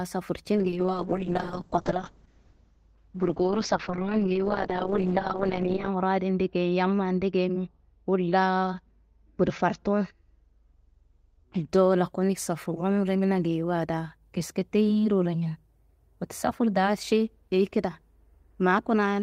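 From 0.56 s to about 11.75 s there's a call bitrate drop. The bandwidth estimate fell and the encoder got squeezed, by ear from something like 32 kbps down to around 7 kbps. The top end gets chopped from 20 kHz to 8 kHz, so the speech goes muffled, and the coarser coding makes it rough and watery. It bottoms out for roughly 5.3 s before things climb back up.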